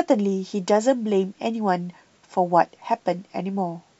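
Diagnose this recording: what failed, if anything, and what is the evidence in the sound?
Nothing failed here: listening through the speech, there's no sign of trouble at any stage from the wiring and converter through to storage and playback.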